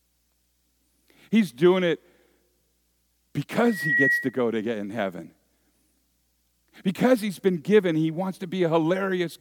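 A speech clip with a loudspeaker feedback squeal from 3.64 to 4.36 s, ending just before "to get in heaven". A single tone near 1.9 kHz swells over roughly a third of a second to sit about 5 dB above the speech. The microphone is picking up the loudspeaker it feeds, and the loop gain at that one frequency has climbed past unity. That self-building swell is what sets it apart from a steady hum or an electrical whine.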